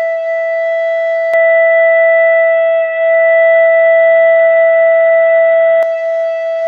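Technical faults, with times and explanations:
1.34–5.83 s, input switched to a poorer device: the music suddenly loses everything above 3.8 kHz, turning dull and boxy, shifts level by around 5 dB and gains a faint new noise floor, with no gap at the switch. Likely a narrower-band input took over, then reverted.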